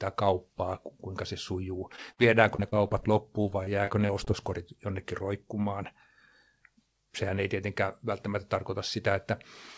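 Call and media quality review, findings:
Short concealed packet loss, 1.96–1.99 s: about 20 ms of audio missing at the decoder, which fits a single lost 20 ms packet. The concealment extends the preceding sound and then crossfades back, heard as a brief smear or wobble.

Short concealed packet loss, 2.13–2.19 s: about 40 ms missing, consistent with two consecutive packets dropped. The longer synthetic fill continues the last pitch or noise, producing an audible wobble where a brief sound can disappear.

Repeated packet loss (robotic sound), 2.55–3.04 s: five separate gaps, the longest 30 ms, with about a fifth of the span concealed. The decoder patches hole after hole in quick succession, so the sound turns choppy, with fragments missing.

Repeated packet loss (robotic sound), 3.42–4.28 s: six gaps, the longest 26 ms, with about 14% of the span concealed. The same recurring concealment on the receive side leaves a choppy, broken texture. 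The audio is band-limited to 8 kHz throughout, which fits the G.722 wideband call path.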